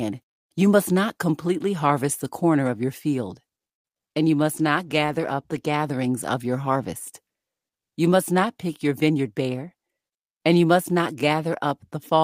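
At 3.75 s, just after "corner of your field", a short stall from a late packet holds the last sound for 86 ms until the packet arrives, then resumes without losing anything. The delay grows by 86 ms. A waveform shows a stretched, repeating segment, and a spectrogram shows frozen harmonics.

Short concealed packet loss follows at 3.98 s and 4.09 s, just before "and you". Each time, 20 ms never reached the decoder and was filled by extending the preceding sound, which leaves a brief smear or wobble. A spectrogram shows blurred, flattened bands.

From 4.57 s to 5.81 s, up to "of your harvest", a call bitrate drop from 32 to 18 kbps makes the encoder code more coarsely. The speech turns rough and muffled, and the spectrogram's upper frequencies thin out for about 1.2 s before recovering.

Between 9.07 s and 9.89 s a jitter buffer speed-up trims about a tenth of a second of pitch-period pieces to shrink the delay. 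Speech runs at 111% speed with unchanged pitch and sounds hurried. A spectrogram shows compressed syllable spacing with intact harmonic spacing.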